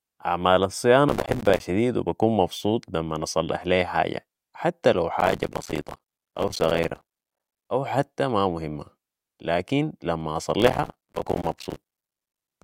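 The processor repeatedly missed its deadlines for buffers of roughly 5 ms, leaving many short silent gaps. This processor overload crackle tears through the speech from 1.09 to 1.60 s, before "شديد و بكون مبسوط"; from 5.20 to 7.65 s, between "حتى لو" and "أو حتى ما مهمة"; and from 10.60 to 12.51 s, after "ما مهمة لكن لما".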